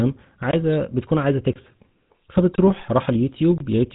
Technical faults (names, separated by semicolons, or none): GSM full-rate codec